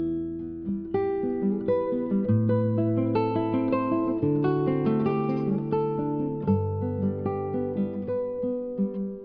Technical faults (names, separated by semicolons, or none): none